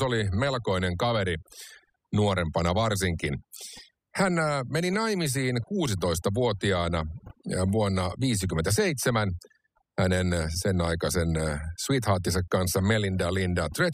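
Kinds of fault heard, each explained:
Overdone noise removal: aggressive spectral noise reduction is gating frequency bands near the noise floor throughout, leaving near-silent gaps with twinkling artefacts.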